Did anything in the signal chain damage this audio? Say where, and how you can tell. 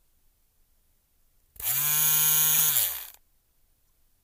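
Yes, at the codec: corrupt frames were decoded at 2.53–2.60 s as a loud burst near -10 dBFS spanning a few frames, and at 3.89 s as a faint blip. The misread gains and codes put energy at wrong frequencies for frame-length bursts, unlike concealed packet loss, which smears or mutes.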